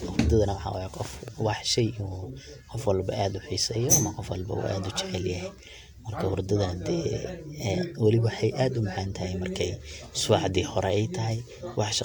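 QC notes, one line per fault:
1.28–1.30 s, loud pop: a single sharp pop, peaking roughly 5 dB above the speech, which carries on underneath. It is likely a sudden voltage step or pulse, such as from static or a switch, entering the signal chain and being shaped by the following circuitry.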